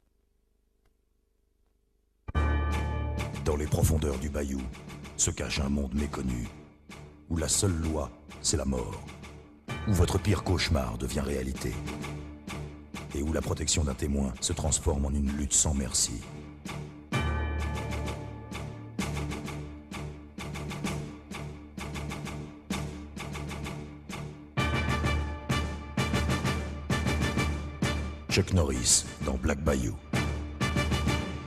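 No technical faults are audible anywhere in the recording.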